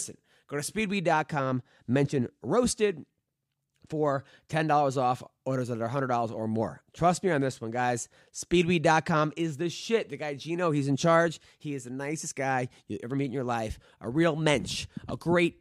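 No faults are audible anywhere in the speech recording.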